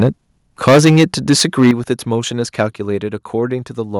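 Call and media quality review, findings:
Microphone overload at 0.00–0.09 s, 0.67–1.92 s and 2.59–2.61 s. Flat-topped peaks with harsh crackle on the loudest syllables. About 6 dB, 14 dB and 1 dB over full scale, with around a tenth of samples clipped in the first two and a small fraction in the third. Likely cause: mic input gain too high, so the converter is driven past its limit. Distinguished from codec distortion because the crackle tracks level and appears only on peaks.

Microphone volume stepped down at 0.68 s, 1.71 s and 2.73 s. Sudden single-step level drops of about 2 dB, 9 dB and 3 dB, with voice and background falling together. Likely cause: call software's automatic gain control cutting device input volume after clipping, since each drop follows a distorted peak. Unlike a fade or a compressor, the level steps once and holds rather than ramping or recovering.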